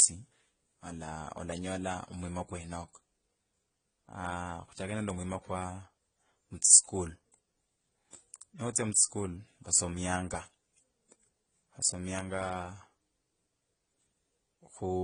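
Throughout, the speech has nothing above 10 kHz and two layered kinds of coding smear, likely transcoding between lossy codecs, with HE-AAC re-encoded as AAC-LC.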